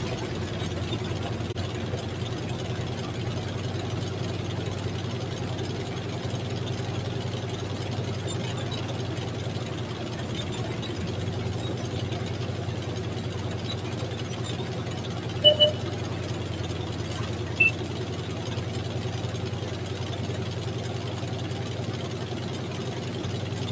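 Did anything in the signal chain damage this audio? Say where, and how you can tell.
No, nothing damaged this audio.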